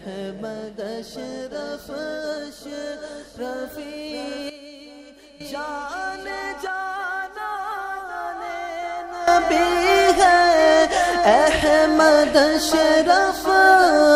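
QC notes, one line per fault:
4.50–5.41 s, sudden gain jump: level drops about 12 dB instantly and the background noise drops with it, then snaps back; likely an unramped digital gain change, not a fade.
9.28 s to end, sudden gain jump: level steps up about 15 dB in one sample, noise floor rising equally and staying raised; likely an unramped gain setting, not compressor pumping.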